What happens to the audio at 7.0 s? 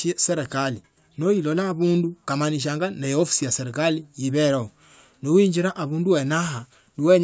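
Nothing goes wrong at 7.0 s; the speech carries on intact through that moment with no dropout, glitch or other audible fault.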